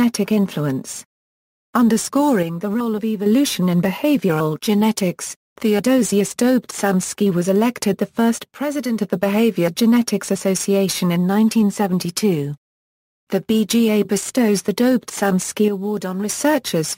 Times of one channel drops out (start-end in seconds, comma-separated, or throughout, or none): 2.43-3.26, 8.43-9.00, 15.68-16.29